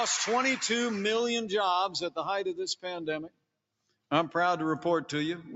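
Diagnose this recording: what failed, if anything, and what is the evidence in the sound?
Throughout the clip, held sound and its tails keep sinking and recovering while onsets come through intact, so the level pumps by roughly 5 dB and the decay sounds thinned. This is a noise suppressor applied to music or sounds, left active in the call processing stage. Tuned for speech, it takes sustained tones, ambience and reverb for background noise and keeps pulling its gain down on them. The audio stays band-limited to 8 kHz, as the call path does.

At 3.28 to 3.56 s and again at 3.80 to 4.11 s, the sound drops away, falling by about 21 dB at its deepest, then returns. Each event is sound cut by the noise suppressor, again in the call processing stage. Here the suppressor judged this sound to be noise and attenuated it far harder than the surrounding material. Together the two cuts affect roughly half a second of sound.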